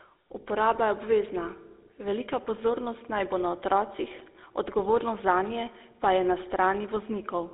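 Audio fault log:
Throughout: GSM full-rate codec, speech sounds buzzy and gravelly with nothing above 3.8 kHz, from coarse pulse-driven vocal-tract coding at 13 kbps over a 300 Hz to 3.7 kHz line.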